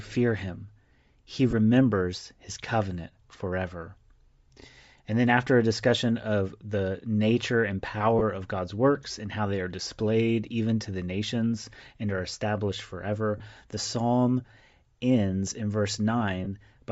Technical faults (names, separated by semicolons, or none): Bluetooth LC3 compression; lost LE Audio frames